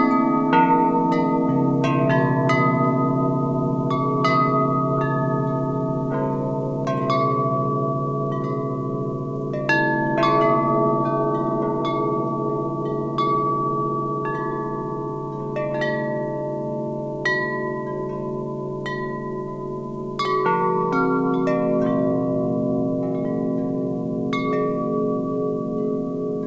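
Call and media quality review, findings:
No faults found in clip.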